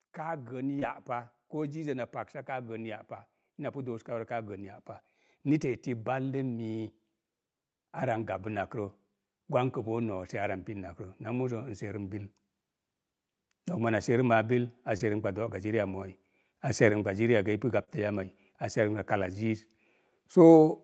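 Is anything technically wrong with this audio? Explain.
Yes, there are three kinds of fault in this speech clip.

Automatic gain rising, from 0.17 to 4.84 s: the gain control decided the input was too quiet and pushed it up by about 8 dB over several seconds, so the voice and the background swell together.

Short concealed packet loss at 0.79–0.83 s, 14.97–15.02 s and 17.84–17.89 s: roughly 20 to 40 ms of audio arrived too late, and the receiver papered over it by extending the preceding sound. You hear a quick smear or wobble, and a brief consonant can drop out.

Lost packets rebuilt from error correction at 0.81–0.83 s, 5.61–5.71 s, 8.43–8.65 s, 15.00–15.02 s and 17.87–17.97 s: the next Opus packet carried a low-bitrate backup copy, which the decoder played instead. There's no gap, but those 20 to 120 ms stretches sound grainier and noisier. All of this sits within a call path that carries nothing above 8 kHz.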